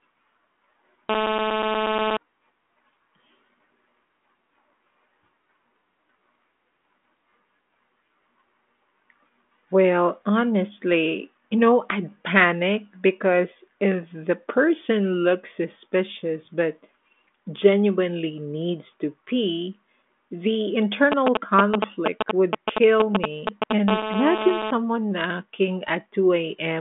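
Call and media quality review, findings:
GSM phone buzz, 1.10–2.17 s: hard raspy buzz at 217 Hz, dense harmonics, steady throughout, about 2 dB below speech level. Probable component: analogue input stage near a 2G handset in a call, demodulating the TDMA burst envelope. Continuous tone separates it from the galloping signalling pattern. Second instance at 23.88–24.71 s, same 217 Hz rasp, about 5 dB below speech, again unbroken. Unrelated to speech content.

GSM signalling bursts, 21.12–23.73 s, starting right after "needs to pee the": galloping dit-dit-dit ticks and short 217 Hz buzz fragments, roughly as loud as the speech. Probable component: the same audio circuitry rectifying sparse control bursts from a nearby 2G phone setting up or idling. Gaps between groups distinguish it from steady call buzz; ends shortly before the 23.88 s buzz.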